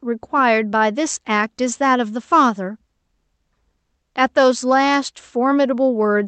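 Nothing goes wrong anywhere in this speech; it just comes through an ordinary call path, with the top end stopping around 8 kHz the way a wideband Opus setting would leave it.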